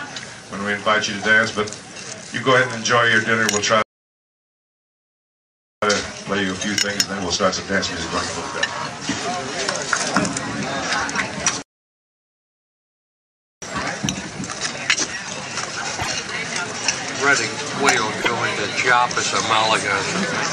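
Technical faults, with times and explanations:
3.82–5.82 s and 11.62–13.62 s, playback stall: The audio stops mid-flow and stays silent for 2 s each time. It then resumes. A silence this abrupt and this long is not part of the material. The likely cause is that the player ran short of data, or its output thread was blocked, so nothing reached the output until it recovered. Both gaps are the same length.
5.82–8.82 s and 13.62–16.65 s, time-compressed catch-up: Right after each stall the audio runs fast but keeps its normal pitch. It runs at 1.1 times speed after the first gap and 1.25 times after the second. The player is working off the backlog the stall left behind. It drops small slices and cross-fades across the joins. That is why the sound feels hurried.
16.00 s and 18.20–18.28 s, repeated frames: A short piece of audio plays twice in a row, which is heard as a stutter. At 16.00 s the repeated block is 26.1 ms, which fits a single compressed frame. 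At 18.20 s it is 52.2 ms, which fits two frames. The decoder received the same data again and played it again. Each repeat adds its own length to the clip.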